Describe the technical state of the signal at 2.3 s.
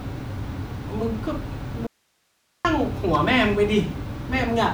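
At 2.3 s the speech is gone, leaving only faint hiss roughly 45 dB below the normal level. This audio dropout to a faint residue runs from 1.87 to 2.65 s, cutting abruptly, likely because the signal feed broke while the downstream path stayed live.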